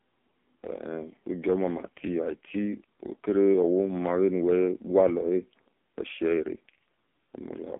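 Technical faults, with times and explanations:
throughout, AMR narrowband mobile codec: a very low-bitrate AMR-NB coder, pointing to about 5 kbps, strips everything above 3.7 kHz, leaving the speech thin, buzzy and synthetic.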